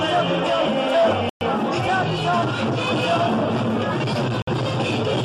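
A Bluetooth stall is the likely cause here: interference held up the wireless packets, the headphones' buffer ran empty, and playback paused until the resent data arrived. The audio drops to silence at 1.29 s for about 116 ms, resuming at 1.41 s, then again at 4.42 s for a shorter 54 ms gap ending at 4.47 s. Each time the sound cuts out abruptly and carries on from where it left off.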